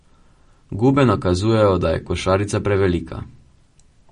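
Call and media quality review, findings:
Watery, swirly speech with metallic edges on s sounds and no content above 10.5 kHz, throughout; likely MP3 compression at a low bitrate near 40 kbps, encoder cutting treble and toggling weak lines.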